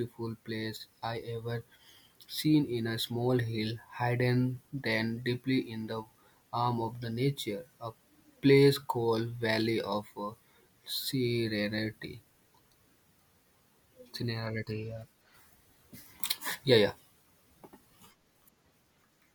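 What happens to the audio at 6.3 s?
Nothing goes wrong at 6.3 s: the speech carries on cleanly through that moment with no dropout, glitch or other fault.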